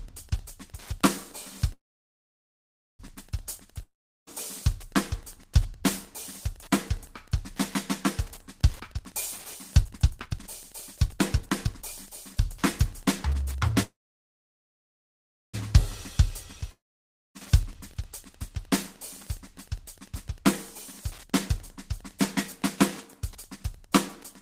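Wi-Fi interference runs through the whole 24 s of music. A nearby Wi-Fi radio's transmissions are being picked up and rectified by the audio circuit, and its beacon, repeating every 102.4 ms, leaves a steady ticking just under ten times a second. It sits about 30 dB below the music, so it stays in the background.

At 1.73 s a call audio freeze begins. The most likely cause is that packets were held up in transit and the jitter buffer ran dry. The receiver stretches the last bit of sound into a brief fading buzz, then about 1.21 s of near-silence follows. At 3.01 s the music resumes exactly where it stopped. Nothing is lost, but everything after it now arrives 1.26 s late.

A long network dropout follows from 3.83 to 4.29 s, likely because no audio reached the receiver for that stretch. The last sound fades out quickly and about 0.38 s of silence remains. When the music returns it has jumped forward, and roughly 0.44 s of it has gone.

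From 8.68 to 13.70 s a jitter buffer speed-up is under way. The buffer is holding more audio than its target, so the receiver repeatedly cuts out short pitch-period slices to shrink the backlog, removing about a second in total. The pitch stays the same, but the music plays at 123% speed, sounds rushed, and its tempo no longer holds steady.

A second call audio freeze runs from 13.83 to 15.56 s, again most likely from delayed packets emptying the buffer. A short decaying buzz gives way to about 1.62 s of silence. The music then continues without a break in its content, now a further 1.71 s behind.

A second long network dropout, from 16.71 to 17.37 s, likely comes from another stretch where no audio arrived. After a brief fade there is about 0.59 s of silence, and the music comes back with roughly 0.64 s missing.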